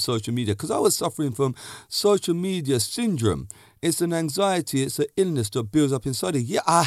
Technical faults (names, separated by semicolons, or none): none